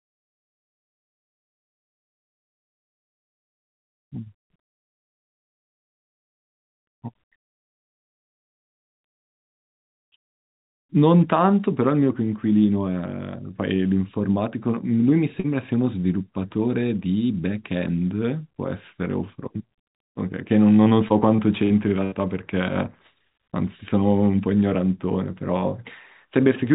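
At 15.4 s, about 40 ms of the call arrived too late for the decoder, and the receiver covered the hole by extending the preceding speech and easing back in. This short concealed packet loss sounds like a brief smear in the voice, lasting until about 15.46 s.

At 17.89 s there is a single sharp click. The waveform jumps straight from one value to a later one, most likely because dropped samples took out a tiny fraction of a millisecond of the stream. That is far too little to remove any speech.

From 20.84 to 22.14 s, packets went missing again and again, leaving five gaps totalling about 200 ms, the longest 78 ms. Each gap was patched from the speech just before it, so roughly 15 percent of that stretch is synthetic. This repeated packet loss makes the voice choppy, and it stays band-limited, with nothing above 4 kHz, which fits a narrowband G.711 call path.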